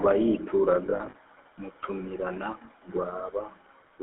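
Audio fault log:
Throughout: GSM full-rate codec. The speech carries the buzzy, gravelly roughness of the original GSM coder, plainly audible across the clip. The coder rebuilds the voice from a vocal-tract filter excited by a sparse, regular pulse train, which gives that rasp. The band runs from about 250 Hz to 3.6 kHz, so the voice is thin and muffled. The coarseness fits a 13 kbps full-rate stream.
0.86 to 1.15 s: lost GSM frames. A stretch of about 280 ms turns intermittently rough and metallic, with short ringing holds breaking up the speech. About 140 ms of it is missing in total, in short runs no longer than a few tens of milliseconds. That fits roughly seven 20 ms frames dropped. Each gap is filled by replaying the last good frame's settings, which produces the brief, ringing sustain instead of silence.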